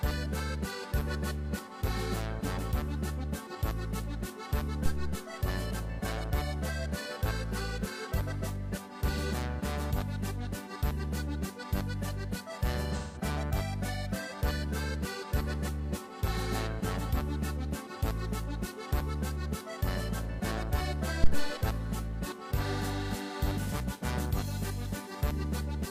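A supply switched on or off on a live input twice, and the voltage step passed through the coupling capacitors as a phantom power thump. The first runs from 4.86 to 5.32 s, a deep low thud that dies away over about 105 ms, and the second from 21.24 to 21.59 s, decaying over about 80 ms. Between them, AAC frame loss with concealment occurs from 12.98 to 13.21 s. The decoder lost a run of data, about 0.17 s, which fits four consecutive frames, and rebuilt the gap by reusing and reshaping the last good spectrum. The result is a brief smeared, noisy and phasey patch where the detail of the audio blurs. The gap is short enough that the sound does not fall away into silence.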